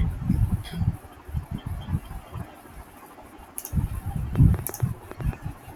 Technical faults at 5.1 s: train of clicks

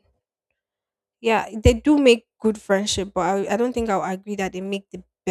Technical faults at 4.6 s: none

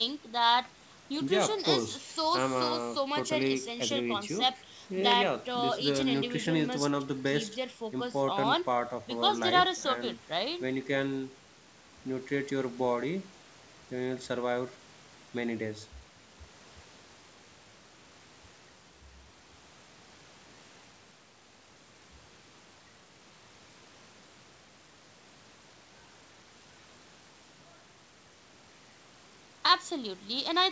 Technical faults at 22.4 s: none

